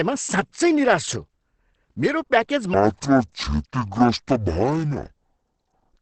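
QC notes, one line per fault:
Throughout: Opus compression, likely. The speech sounds muffled and hoarse, with heavy codec damage. Nothing is heard above 8.6 kHz. This fits Opus in its SILK speech mode at wideband bandwidth, at a low rate near 12 kbps.
2.74 s to the end: section at the wrong speed. The speech plays at 0.52 times its recorded speed. Pitch drops by roughly ten semitones, so it sounds deep and slow. Speed and pitch move together, which points to playback on the wrong clock.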